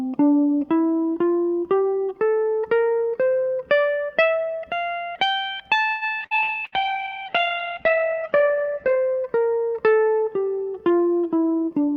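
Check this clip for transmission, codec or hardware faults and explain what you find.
Five faults cluster around the middle and end of this music clip.

From 5.89 to 6.75 s, repeated packet loss (robotic sound): four holes arrived in quick succession, the longest 120 ms, and each was patched by stretching the preceding sound. About a third of the stretch is concealment, so the music turns choppy, with pieces missing.

At 6.19 s, a skip ahead: the receiver dropped roughly 70 ms of audio that was already queued, shortening its delay. Playback jumps forward, and the music on either side of the cut is joined almost directly, with a small chunk gone.

From 6.21 to 9.08 s, a call bitrate drop: the bandwidth estimate collapsed and the encoder was starved of bits, which fits a fall to around 10 kbps. The top end is cut from 20 kHz to 8 kHz, leaving the music muffled, rough and watery for about 2.7 s.

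From 6.80 to 7.41 s, a jitter buffer slow-down: with its reserve running low, the receiver repeated short pitch periods to add 77 ms. The music plays at 89% speed at unchanged pitch, sounding drawn out.

From 11.30 s to the end, a jitter buffer speed-up: the buffer held more than its target, so the receiver trimmed roughly 100 ms in small pieces. The music runs at 115% speed at the same pitch, and its tempo feels hurried and unsteady.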